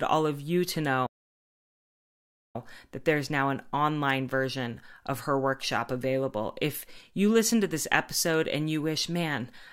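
At 1.06 s, right after "all of you to", the speech cuts to silence for about 1.48 s, resuming at 2.56 s with "that there's now an". This playback stall likely came from the player running out of data or its thread being blocked.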